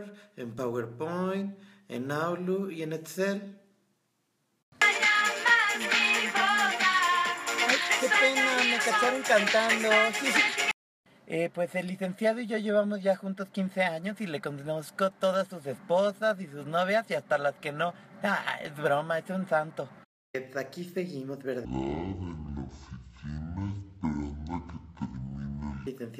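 A section at the wrong speed runs from 21.65 s to 25.87 s. For those four seconds the audio plays at about 0.52 times its proper rate, so everything is stretched to nearly double length and pitched down by roughly ten semitones, turning deep and sluggish. Because speed and pitch drop together at the boundary, the shift is abrupt. The likely cause is a segment being rendered against the wrong clock, at about half the intended rate.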